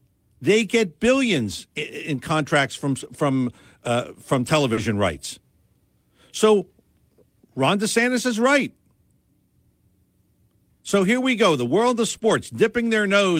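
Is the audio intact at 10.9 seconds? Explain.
No. A lost packet rebuilt from error correction runs from 10.87 to 11.05 s. Each missing packet was replaced by the low-bitrate copy carried in the packet after it, about 100 ms in all, which fits five lost packets. There is no gap, but the sound turns rougher and noisier.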